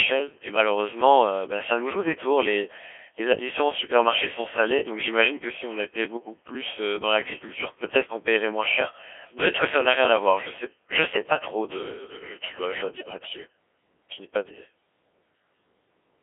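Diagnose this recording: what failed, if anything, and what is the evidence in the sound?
The whole clip has gone through the Codec 2 vocoder at the codec stage. The speech is robotic and buzzy, squeezed into roughly 200 Hz to 3.4 kHz, with heavy damage, which fits a rate around 1.3 kbit/s. The decoder rebuilds the voice from sine waves rather than keeping the waveform.

From 12.97 to 13.18 s there's a burst of bit errors on digital voice radio, a network-stage fault where the synthetic voice lurches in pitch, level and tone into warbly gibberish. That points to a few frames hit by an error rate of several percent, with each corrupted bit scrambling a whole frame's parameters.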